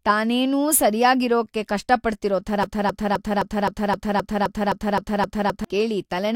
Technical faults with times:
2.63-5.64 broken-record loop

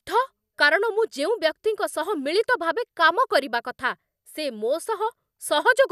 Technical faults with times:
none

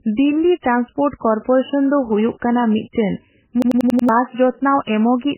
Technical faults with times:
0.00-5.38 MP3 compression
3.62-4.09 system hang loop

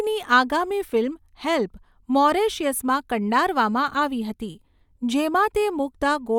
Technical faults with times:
none

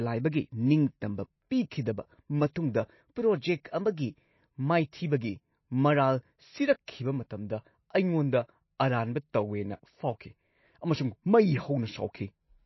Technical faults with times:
0.00-12.65 MP3 compression
2.54 pre-echo

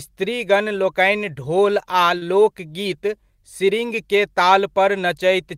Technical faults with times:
2.17-2.23 short concealed packet loss

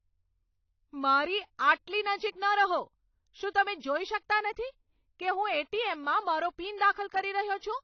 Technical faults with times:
0.00-7.83 AAC compression

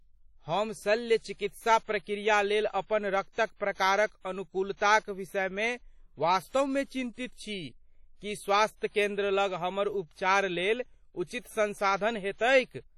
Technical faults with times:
0.00-12.97 WMA compression
6.48-6.54 pre-echo
11.39-11.45 pre-echo

